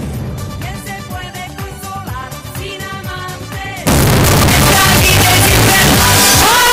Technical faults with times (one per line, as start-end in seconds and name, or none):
3.87-6.72 signed and unsigned mixed up